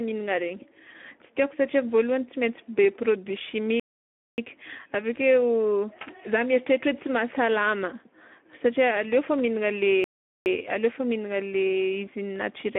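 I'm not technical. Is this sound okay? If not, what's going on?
No. All the way through, the speech sounds hoarse, noisy and boxed in, like an old phone line, with nothing above about 3.4 kHz. That is the Speex codec, an older voice-chat compression that squeezed the speech too hard and lost detail.

The sound also cuts to silence twice: from 3.80 to 4.38 s, just after "be produit", and from 10.04 to 10.46 s. These are playback stalls, most likely the player running out of audio data and waiting before it could continue.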